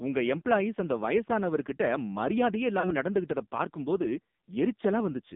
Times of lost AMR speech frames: 2.80-2.96

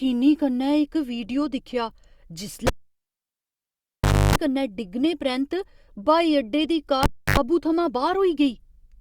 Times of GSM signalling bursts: none

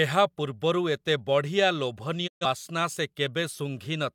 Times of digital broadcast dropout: 2.26-2.45

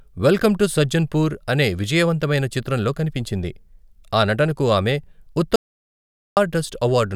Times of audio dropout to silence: 5.56-6.37

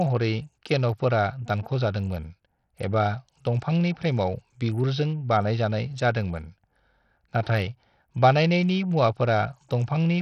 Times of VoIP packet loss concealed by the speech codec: none

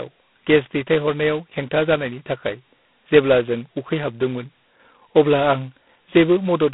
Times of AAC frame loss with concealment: none

